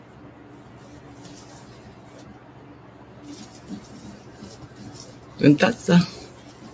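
A noise suppressor applied to music or sounds is active for the full length of the clip. Built for speech, it treats sustained tones, ambience and reverberant decay as noise to be removed. Onsets pass largely intact, but held material and tails are pulled down by about 5 dB, then allowed back up. The level pumps and flutters and the sound thins out between attacks. The call microphone processing that band-limits the audio to 8 kHz is not at fault.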